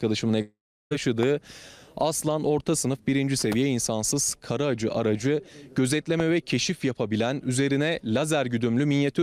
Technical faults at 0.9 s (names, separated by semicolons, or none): long network dropout